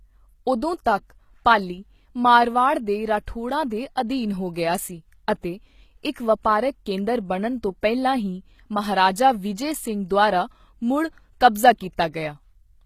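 HE-AAC compression throughout, likely at a bitrate near 20 kbps: rebuilt, copied-up treble makes s sounds gritty and lispy, with nothing above 14.9 kHz.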